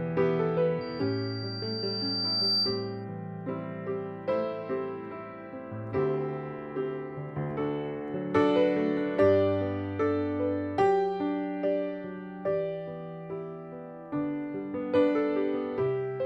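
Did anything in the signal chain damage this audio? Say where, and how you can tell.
Yes. From 0.81 to 3.05 s a pure 4.7 kHz tone swells over roughly a second and a half into a squeal about 5 dB above the programme. That is loudspeaker feedback squeal in the analogue stage: the microphone re-captured its own loudspeaker, and loop gain above unity at that frequency let it self-reinforce.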